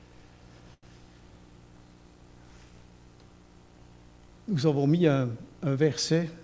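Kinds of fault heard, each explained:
Short stall from a late packet: at 0.74 s a packet showed up late, the jitter buffer ran dry, and the receiver stretched the last sound for 88 ms, giving a held moment with a faint buzz or dip. Then it carries on from the same spot with nothing lost, just 88 ms later.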